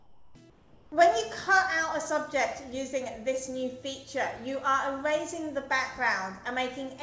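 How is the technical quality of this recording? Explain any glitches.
The audio carries a background glitch at the very start. From 0.0 to 0.35 s, and again from 0.50 to 0.92 s, the real background is swapped for comfort noise in place of the background. The likely cause is discontinuous transmission: the sender stopped sending during these quiet stretches, and the receiver filled them with synthetic noise that only roughly matches the room. What you hear is a flat, featureless hiss, about 8 dB and then about 6 dB quieter than the true background, which returns between and after the two gaps. Throughout, nothing is heard above 8 kHz, consistent with the G.722 call codec.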